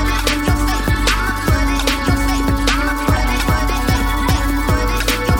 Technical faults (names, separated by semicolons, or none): none